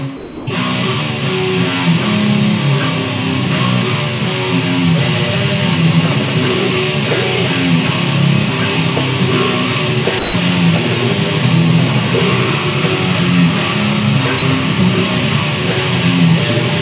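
At 0.17 s, 10.19 s and 14.39 s, the sender's voice detector likely judged the incoming sound to be background and stopped transmitting, so the receiver filled the gaps with comfort noise. This sound dropped by the voice detector lasts 300 ms, then 150 ms, then 30 ms. Each time, the audio gives way to steady noise or near silence and resumes once detection triggers again. The call path lets nothing through above 4 kHz, consistent with G.711 mu-law at 64 kbps.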